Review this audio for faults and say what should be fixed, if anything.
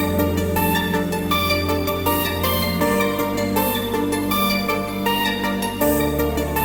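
Nothing needs fixing; no faults are audible here.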